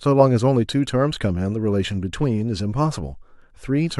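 No technical faults can be heard anywhere in this speech recording. There is no moment in the sound that calls for a time or a measurement.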